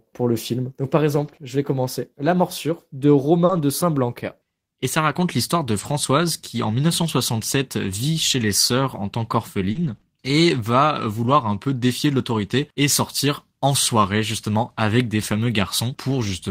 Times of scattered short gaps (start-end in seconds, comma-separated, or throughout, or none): 9.71-11.37